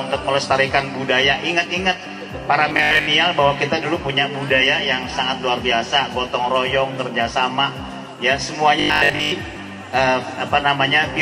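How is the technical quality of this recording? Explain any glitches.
Two short glitches, both robotic sound from repeated short buffers: 2.69–3.07 s and 8.80–9.34 s. The sound turns into a rigid, metallic 50 Hz buzz, likely from a roughly 20 ms chunk being replayed over most of those stretches.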